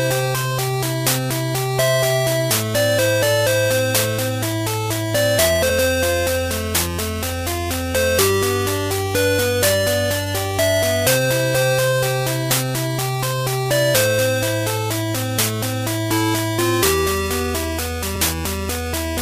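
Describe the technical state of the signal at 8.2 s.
At 8.2 s the signal is intact, with no dropout, distortion, click or other technical fault to be heard.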